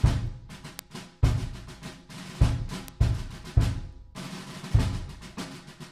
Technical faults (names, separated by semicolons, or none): word clock ticks